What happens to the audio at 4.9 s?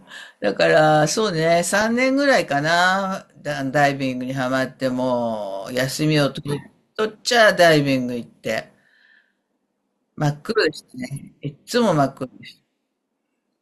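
At 4.91 s, bit errors from weak reception slip past the error correction into the MP2 data, at an error rate of roughly a third of a percent. Corrupted samples put short blips of noise into individual sub-bands, heard as DAB burbling over the speech.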